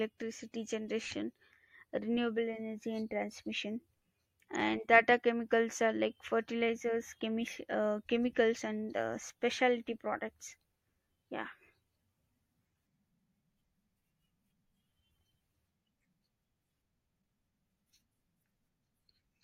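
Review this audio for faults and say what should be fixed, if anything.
A corrupt frame decoded at 4.55 s in this speech. A single compressed frame arrived with flipped bits, and the decoder played it rather than discarding it, so misread codes and gain values placed energy in the wrong parts of the spectrum for that frame alone. The result is a brief error cutting across the speech, peaking at about -35 dBFS. To prevent it, check each frame's integrity before decoding and conceal any frame that fails instead of playing it.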